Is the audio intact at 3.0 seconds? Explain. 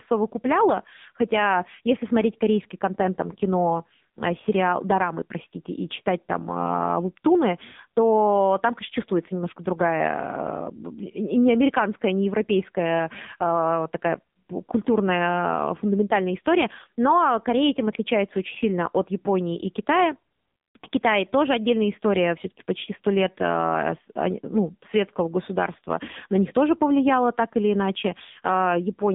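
No. At 3.0 s, as throughout the speech, the sound carries the AMR narrowband mobile codec. Nothing above 3.8 kHz survives, and the band sits roughly between 150 Hz and 3.7 kHz. The codec rebuilds the voice from a vocal-tract model fed by sparse pulses, and the heavy damage here, a buzzy, synthetic grain, points to a low rate near 6.7 kbps. A plain telephone band-limit would sound dull but clean, without that buzz.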